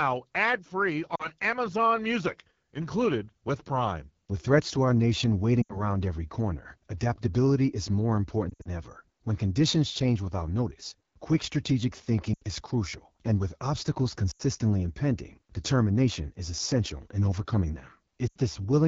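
The speech has a rough, raspy, buzzy texture throughout, and the highest frequencies sound like hiss rather than detail. This is the AMR wideband (HD Voice) codec at 8.85 kbit/s, one of its lowest rates. At that rate its pulse-driven vocal tract model can't follow the voice closely below 6.4 kHz, and the band from 6.4 to 7 kHz is filled with shaped noise.

Short glitches interrupt the speech six times, each a quick drop to near silence that then recovers weak and rough. These are lost AMR speech frames. When frames are lost, the decoder repeats the last good pitch and vocal tract settings with falling gain. The first comes at 1.16 to 1.27 s, right after "ad free", and is about 40 ms long. The next runs from 5.61 to 5.81 s, between "threats to our nation" and "every corner adaptability is", and lasts about 80 ms. From 8.50 to 8.70 s, after "corner adaptability is more", roughly 120 ms drops out in patches over 160 ms, the longest about 60 ms. 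Three more gaps of about 80 ms fall at 12.33 to 12.43 s, 14.31 to 14.42 s and 18.28 to 18.38 s. These lengths fit whole 20 ms frames.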